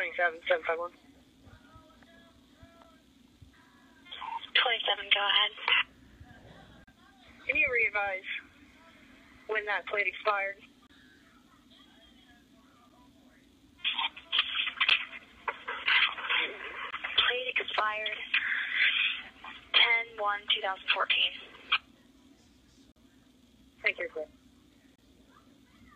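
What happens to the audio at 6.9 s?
A gap between stream segments opens from 6.84 to 6.88 s. Two segment timestamps fail to meet, so the player inserts about 36 ms of hard-edged silence.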